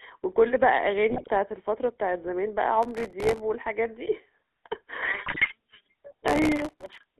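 The whole clip of speech has a buzzy, gravelly roughness and a thin, boxed-in tone, with nothing below about 250 Hz or above about 3.6 kHz. This is the GSM full-rate codec, and its damage is plainly audible. The codec rebuilds the voice from a vocal-tract filter driven by sparse, regularly spaced pulses, which fits its 13 kbps rate. That coarse excitation is what leaves the gritty buzz over every syllable.

From 1.10 to 1.29 s the voice breaks into squawks and gargling. It happens again, harder, from 5.26 to 5.52 s, where the pops and level jumps are stronger. These are GSM bit errors. Corrupted bits reached the decoder, scrambling the filter, pitch and gain values frame by frame, so the spectrum bends and the level lurches. The second burst points to a noticeably higher error rate than the first.

From 2.83 to 3.40 s, and again from 6.28 to 7.10 s, a gritty, tearing crackle rides on top of the voice and stops abruptly once each stretch ends. 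This is processor overload crackle. The processor missed its deadline on dozens of very short buffers in a row, each around a millisecond and a half. Each miss replayed a sliver of old audio with hard edges, and the rapid string of those splices fuses into the crackle. The later stretch is longer, with more missed buffers.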